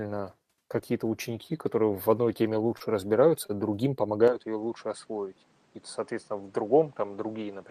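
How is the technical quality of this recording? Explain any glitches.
The recording has two brief timing glitches and a lasting change in tone partway through.

At 2.77 s and again at 3.46 s, a sound hangs on a moment too long, with a faint buzzy smear, and then the speech picks up exactly where it left off. These are short stalls from a late packet. Each time, the jitter buffer ran dry, and the receiver stretched the last audio, by about 30 ms in the first case and 25 ms in the second, until the packet arrived. Nothing is lost, but the timing shifts slightly.

From 4.28 s to the end, the speech abruptly turns duller and a little quieter, and new background noise sits roughly 30 dB below it. There is no gap at the change. Nothing above 9.4 kHz remains after that point, which fits the input being switched to a poorer device, likely a different microphone with a narrower band, its own level and its own noise floor.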